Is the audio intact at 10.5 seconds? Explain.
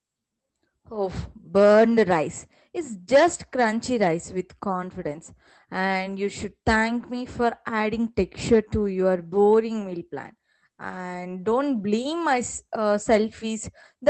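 Yes, the speech at 10.5 seconds is intact, with no fault at that moment beyond the ordinary character of the call path it passed through.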